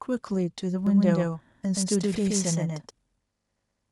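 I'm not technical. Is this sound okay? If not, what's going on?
No. From 0.87 to 2.91 seconds the speech is heard twice, a second copy trailing about a sixth of a second behind and about as loud, then it cuts off abruptly. This doubled audio track is likely the same recording captured twice through a slower path.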